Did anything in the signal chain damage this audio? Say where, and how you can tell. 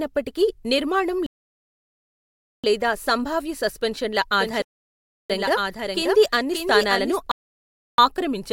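Yes. Three rebuffering stalls point to the network and playback stage: the player ran dry and waited for more data. The speech drops to silence from 1.26 to 2.64 s, resuming on "లేదా సంభావ్య సస్పెన్షన్ల", then again from 4.62 to 5.30 s and from 7.31 to 7.98 s, adding 1.37 s, 0.68 s and 0.67 s. Each resumes exactly where it stopped. A waveform shows flat silent gaps, and a spectrogram shows full-width blank columns with hard edges.

A doubled audio track runs from 4.39 to 7.17 s, starting right after "నిర్మాణం లేదా సంభావ్య సస్పెన్షన్ల". A second full-band copy trails by about half a second, roughly 5 dB quieter, with no decay or room colour. It is likely a second capture through a slower path in the recording or processing chain. On a spectrogram, the harmonic patterns repeat as fainter shifted ghosts. On a waveform, the copy begins and ends abruptly.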